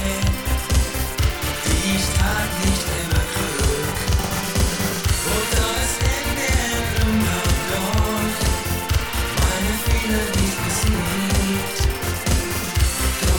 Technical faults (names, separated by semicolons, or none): channel delay (doubling)